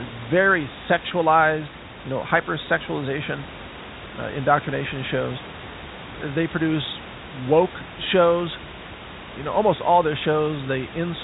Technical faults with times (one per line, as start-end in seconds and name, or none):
none